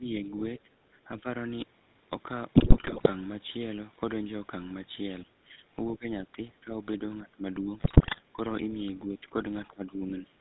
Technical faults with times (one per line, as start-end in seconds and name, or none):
0.00-10.40 GSM full-rate codec
0.00-0.14 speech suppressed in double talk
0.63-1.26 speech suppressed in double talk
2.56-3.09 GSM bit errors
5.24-8.39 speech suppressed in double talk
7.80-8.20 GSM bit errors
9.07-9.35 speech suppressed in double talk
9.68-10.33 speech suppressed in double talk